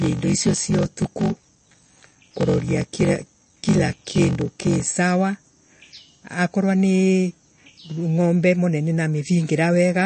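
Block size mismatch (padded), 0.0 to 4.87 s: each block is zero-filled short of the 1024-sample read, which adds a 46.9 Hz buzz and slows the speech to 0.861 speed while keeping its timbre.

MP3 compression throughout, likely from a low bitrate around 34 kbps: nothing is left above 8.3 kHz, and plainly audible watery swirl and smeared attacks run through the speech.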